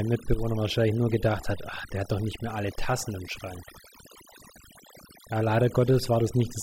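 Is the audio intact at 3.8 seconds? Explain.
No. At 3.8 seconds the speech carries overdone noise removal, which runs through the whole clip. The reduction was set so hard that any frequency band sitting near the estimated noise level is pulled almost to nothing, and quieter parts of the voice are cut along with it. The pauses fall to near silence sprinkled with twinkling specks. On a spectrogram the background appears as a dark field dotted with isolated bright flecks, while the speech shows ragged, gappy harmonics.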